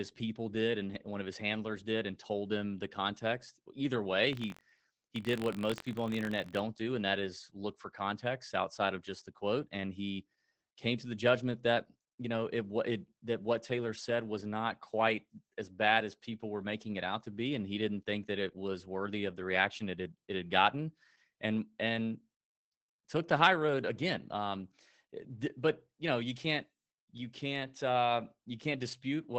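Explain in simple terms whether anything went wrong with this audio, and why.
Two things went wrong. Throughout the clip, Opus voice compression is heard: the speech sounds muffled, hoarse and slightly robotic, with the crisp top end missing above about 8 kHz. This dullness is steady from start to finish, which sets it apart from a passing glitch.

From 4.31 to 6.61 s there is buffer tearing: a rattling buzz at about 47 times per second rides on the speech. The playback was reading its memory out of step with the writing, so a tiny slice from roughly a tenth of a second earlier got spliced in each cycle, which fits a 1024-sample buffer. Unlike a dropout, nothing goes silent.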